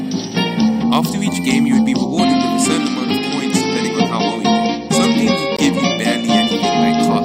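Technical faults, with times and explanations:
5.57 to 5.59 s, block of digital silence: the sound drops to silence for about 20 ms and returns with no fade in or out, so it is heard as a short hole. This points to an output buffer that was not filled in time. A packet-loss gap would instead be smoothed or filled with a repeated or faded sound.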